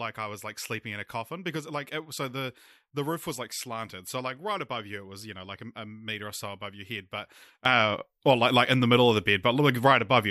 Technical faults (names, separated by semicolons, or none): sudden gain jump